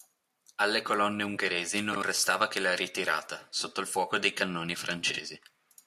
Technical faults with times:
1.93-2.02 frames out of order
5.09-5.19 frames out of order

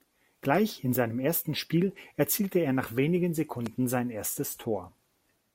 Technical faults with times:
3.66-3.69 loud pop

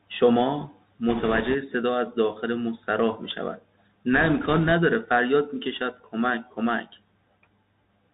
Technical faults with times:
0.00-8.14 Bluetooth CVSD headset codec
1.09-1.55 bit errors on a Bluetooth voice link
4.13-4.72 bit errors on a Bluetooth voice link

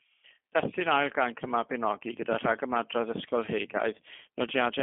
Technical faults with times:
0.00-4.82 G.729 codec

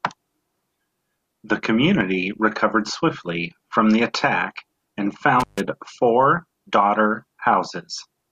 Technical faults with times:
5.40-5.60 intermittent contact

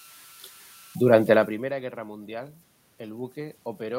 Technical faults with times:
0.00-3.99 converter idle tones
1.46-3.99 automatic gain rising

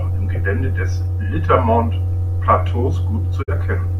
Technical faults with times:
3.41-3.52 digital broadcast dropout

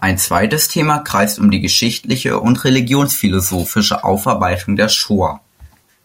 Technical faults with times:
4.24 electrical switching spike

